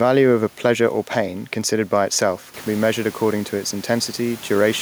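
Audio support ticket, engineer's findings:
No fault found in the speech path. Room noise sits under the speech and steps up by about 10 dB at roughly 2.5 s, still about 23 dB below the speech after the rise.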